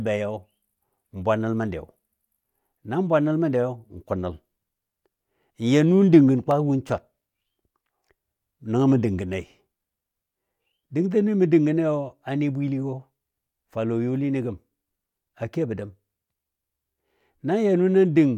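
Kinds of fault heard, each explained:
Dropped samples: Two single sharp clicks cut through the speech, one at 6.51 s between "dəng gən" and "win swar", and one at 9.33 s just after "nəngɔ mə". Each is a brief tick with no gap in the sound. The likely cause is a handful of samples missing from the stream, far less than a millisecond each. The waveform then jumps straight to a later value, and that sudden step is what clicks.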